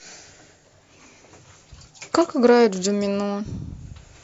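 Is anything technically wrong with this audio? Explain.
No, nothing technically wrong can be heard here.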